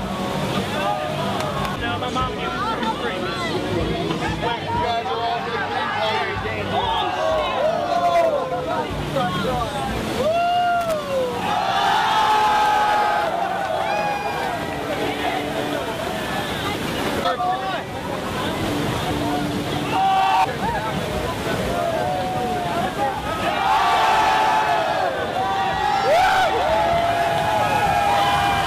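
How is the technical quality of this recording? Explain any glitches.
The recording has one glitch, loose connector crackle, from 10.81 to 10.94 s. A worn or dirty contact intermittently breaks the signal path, chopping the audio, heard as a short irregular scratchy burst.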